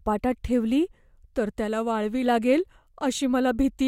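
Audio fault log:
No faults detected in the speech.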